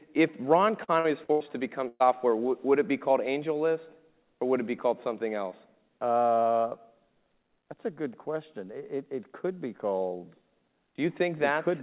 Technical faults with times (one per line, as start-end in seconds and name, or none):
0.84-1.43 repeated packet loss (robotic sound)
1.88-2.03 burst of packet loss